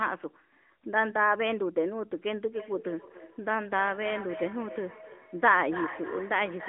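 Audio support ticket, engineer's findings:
Feedback echo between two devices, 2.51 s to end: nearby device replays the call and the mic recaptures it. Repeats come roughly every 300 ms, about 12 dB below the speech.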